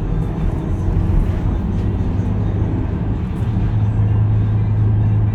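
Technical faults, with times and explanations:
Nothing stood out on listening to this recording of sounds.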